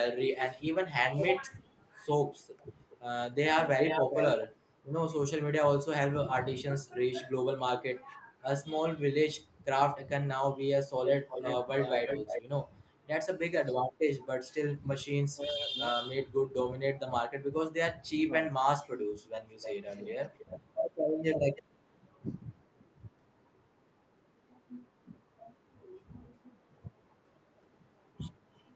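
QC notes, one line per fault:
1.45–4.47 s, 11.05–12.42 s and 19.61–21.63 s, echo leak: a delayed second copy of the speech trails the talker by 415 ms, 338 ms and 316 ms. It starts about as loud as the speech and gets progressively weaker. The likely cause is a far-end echo canceller passing loudspeaker pickup. On a spectrogram it shows as repeated, offset harmonic stripes.
14.47–15.75 s and 18.14–19.14 s, speech suppressed in double talk: while the other side speaks, the talker's voice dips by up to around 20 dB over roughly half a second each time. This is likely the echo canceller ducking both voices together.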